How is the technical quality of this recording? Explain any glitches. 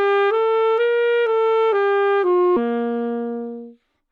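The recording has one glitch. At about 2.56 s the audio jumps abruptly ahead with a brief blip, and the continuity breaks. The likely cause is a stream segment skipped: one chunk failed to load and playback carried on from the next. That differs from a dropout, which leaves a silent gap and then resumes where it stopped. Here nothing goes quiet; the sound simply lurches forward past missing material.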